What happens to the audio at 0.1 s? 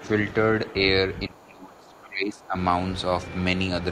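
At 0.1 s the speech carries on intact, with no dropout, click, distortion or other fault at that moment.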